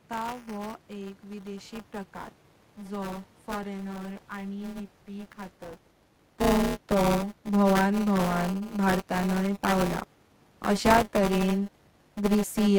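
Buffer tearing runs through the whole clip as a robotic buzz at 200 Hz, heard only while speech is present. The writing program and the playback hardware have drifted so that their positions cross inside each buffer period. Roughly 15% of every period replays audio from about 10 ms earlier, one lap of the ring buffer, with hard joins at both edges. The level change near 5.5 s is the talker moving, and the room noise belongs to the recording.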